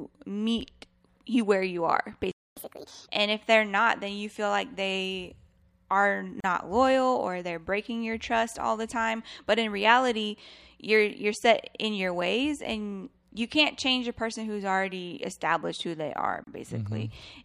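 Playback stall, 2.32 to 2.57 s: the speech cuts out for about 250 ms in mid-flow, leaving dead silence. The likely cause is the player running out of buffered data or its output thread being blocked, so nothing reached the output until it recovered.

Catch-up at higher speed, 2.57 to 3.07 s: right after the stall, the player plays its backlog at 1.5 times normal speed by resampling. Speed and pitch rise together, roughly seven semitones higher, before the speech drops back to normal rate and pitch.

Gap at a join of encoded pieces, 6.40 to 6.44 s: a 36 ms hole opens in the continuous speech, its edges smeared by the codec. Separately encoded pieces were joined untrimmed, leaving the encoder's start delay and final-frame padding as silence, before the speech resumes where it stopped.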